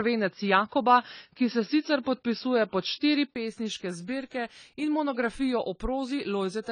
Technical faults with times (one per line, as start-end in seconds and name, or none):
0.00-6.71 low-bitrate audio saved at a high bitrate
0.00-3.36 input switched to a poorer device